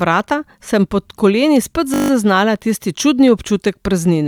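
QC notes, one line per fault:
1.94–2.10 s, system hang loop: one 20 ms slice repeats exactly eight times, a steady 50 Hz buzz before "zaznala tisti čudni". Identical repeats, not a gap, distinguish it from a dropout.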